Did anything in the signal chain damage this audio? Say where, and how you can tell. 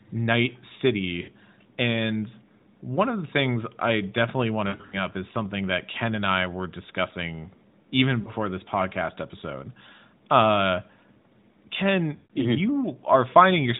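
Yes: lost AMR speech frames, a network and radio-link fault upstream of the AMR-NB decoder, whose 4 kHz narrowband sound is otherwise intact. Gaps sit at 1.22 s (60 ms), 4.68 to 4.96 s (180 ms scattered over 240 ms, longest run 60 ms, between "things I definitely want" and "up is something that"), 8.22 s (40 ms, after "I were discussing even") and 12.16 s (140 ms). The decoder repeats its last good pitch and vocal-tract settings at falling gain, so the sound smears and sags, then returns briefly weak or rough.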